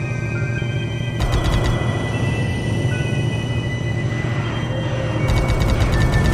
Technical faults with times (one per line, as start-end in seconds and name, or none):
none